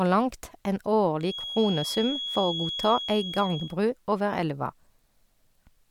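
A speech recording with a feedback whistle running from 1.18 s to 3.78 s, ending just before "over elva": a thin, steady tone near 3.3 kHz sits roughly 10 dB under the voice and swells and fades slowly in level. The likely cause is a loudspeaker-to-microphone loop held right at the edge of feedback. Unlike a full howl, it never builds up, and its single high pitch sets it apart from low mains hum.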